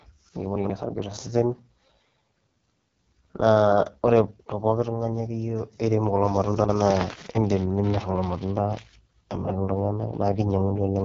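Throughout, the speech sounds rough and raspy with nothing above 7.2 kHz, typical of the AMR wideband (HD Voice) codec at its lowest rate, which fits a 6.6 kbit/s mode.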